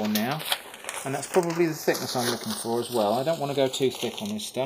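From the very start and all the way through, the two channels are drifting apart. Each side seems to be running off its own clock, mismatched by something like 70 ppm, so the offset between them keeps creeping until it's around a third of a millisecond by the end. Fold it down to mono and the comb-filter notches slide gradually down through the spectrum, giving that slow, swirling flanging on everything.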